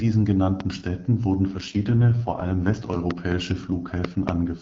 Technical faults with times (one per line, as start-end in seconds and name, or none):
0.60-0.62 loud pop
1.48-3.00 AMR rate drop
3.11-3.34 loud pop
4.05-4.31 loud pop